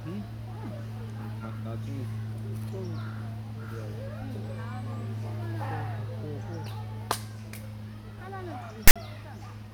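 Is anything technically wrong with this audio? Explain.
Yes. From 8.88 to 8.96 s there are file tags played as audio: the decoder reads a block of text tags as if it were sample data, then its zero padding. The result, across this roughly 80 ms block, is a hard-edged, loud, lopsided rasp that cuts abruptly to silence.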